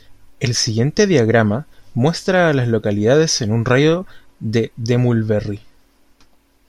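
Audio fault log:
No faults were heard in the speech recording. Nothing in it calls for a timed entry in this log.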